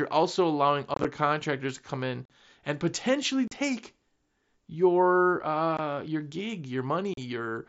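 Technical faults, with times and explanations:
0.94–1.05 s, 2.25–2.30 s, 3.48–3.52 s, 5.77–5.79 s and 7.14–7.18 s: unconcealed Bluetooth headset packet loss. Short headset packets drop out and nothing fills the gap, so the speech has abrupt holes. The first one sounds like a choppy crackle spread over about 105 ms, with roughly 60 ms missing in total and no single gap longer than 22.5 ms.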